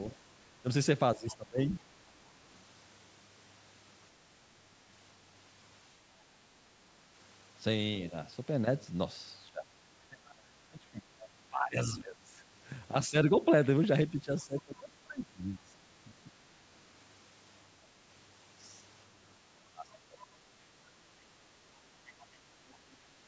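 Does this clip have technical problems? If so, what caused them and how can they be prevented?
Yes. Two related faults recur, both likely from the call's echo canceller struggling when both parties talk at once.

Speech suppressed in double talk: with the far end's voice arriving on the loudspeaker while the talker was also speaking, the canceller could not tell its own talker apart from the echo and turned everything down. The talker's speech dips by roughly 20 to 25 dB or drops out in pieces at 0.12 to 1.81 s, 9.46 to 16.32 s (about four seconds of it affected), and 19.45 to 20.2 s. A better echo canceller with proper double-talk detection, or a headset, would prevent it.

Other side's voice leaking through: the loudspeaker's output reached the microphone and was not fully removed, so a faint second voice, roughly 20 to 30 dB below the talker, sits underneath at 1.29 to 2.57 s, 10.27 to 11.28 s, 19.92 to 20.26 s and 22.08 to 22.96 s. 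Using headphones instead of a loudspeaker, or lowering its volume, would stop this.

The call's normal microphone processing is also audible, with nothing above 8 kHz.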